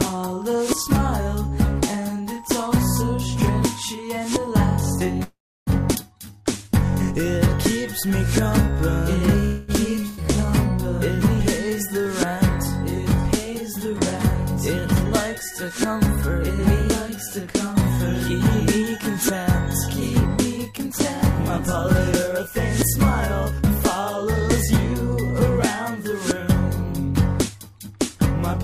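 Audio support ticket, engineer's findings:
Call audio freeze, 5.23 to 5.70 s: sound stalls and smears into a fading buzz, dead silent for the last 320 ms, then resumes where it left off. Likely packets held in transit with the jitter buffer running dry; roughly 434 ms gets inserted, nothing lost. Same thing at 9.45 to 9.71 s, 233 ms of decaying fill that never quite reaches silence.

Skip ahead, 5.95 s: hard jump forward, almost no gap, roughly 150 ms of audio gone and the two sides spliced together. A stretch was dropped in transit or by the jitter buffer overflowing while later audio was already waiting. Again at 10.08 to 10.20 s: about 92 ms of fill, then a jump past roughly 200 ms of material.

Jitter buffer slow-down, 6.18 to 13.80 s: playback dragging at 97% speed, pitch unchanged, sounds a bit stretched. Buffer was low, so the receiver repeated pitch periods and bits of pauses over and over, padding in 255 ms total to rebuild its cushion.

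Jitter buffer speed-up, 13.86 to 28.16 s: runs at 104%, same pitch. Buffer was over target, probably from late packets landing in a bunch, so the receiver kept snipping out short pitch-period slices, about 0.7 s trimmed across the stretch.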